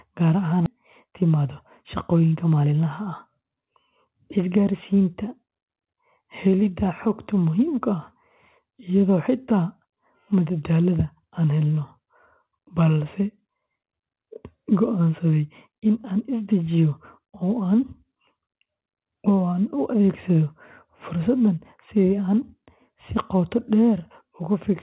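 A speech recording in which, at about 0.66 s, the talk lurches abruptly forward with no gap, so roughly 0.7 s of speech is simply absent and the two sides butt together. That is a skip ahead: audio was discarded, in transit or when the jitter buffer overflowed, while later audio was already queued, and playback jumped straight to it. From 0.76 to 1.45 s, and again from 2.13 to 5.00 s, the speech sounds hurried but keeps its pitch, running about 10% and then 8% fast. This is jitter buffer speed-up: with more audio banked than its target, the receiver repeatedly cut short pitch-period slices, trimming about 70 ms in the first stretch and around a fifth of a second in the second. The band-limited sound, with nothing above 4 kHz, fits a G.711 mu-law call path at 64 kbps.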